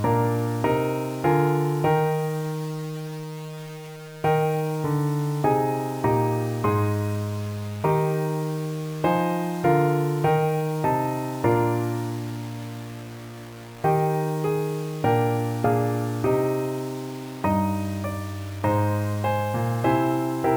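Throughout the clip, the audio appears to have been reduced to about 6 bits with plain rounding and no dither, which is likely low bit depth without dither. With so few steps, the rounding error tracks the waveform instead of spreading into a steady hiss, sitting only around 20 dB below the signal. The result is a coarse, grainy distortion that shifts with the sound itself, roughening quieter passages and making the faintest moments break up or sputter.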